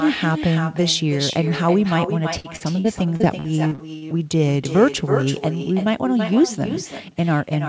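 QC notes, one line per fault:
Throughout: echo with no canceller. The far end plays the call over a loudspeaker and its microphone sends it straight back with nothing removing it, so every phrase returns roughly 300 ms later as a quieter copy, about 9 dB down, and thinner.
2.40 to 4.42 s: repeated packet loss (robotic sound). Packets went missing again and again across this stretch, nine gaps up to 43 ms, each patched by stretching the last sound, so the speech turns choppy and robotic with pieces dropped.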